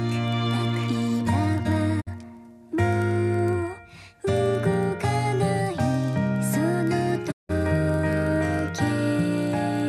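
A low, regular ticking buzz at about 21.5 Hz runs through the whole clip and rises and falls with the level of the sound. This is a filter restarted on every block: each block, which fits a 2048-sample size, starts from silence and opens with a small transient.

At 2.00 s the sound fades out over about 20 ms and stays silent until 2.09 s. At 7.30 s a longer hole follows, lasting until 7.51 s. Both are digital broadcast dropouts: the receiver lost the signal, or received corrupted frames, and muted until good frames resumed. Whatever was transmitted during each gap is gone.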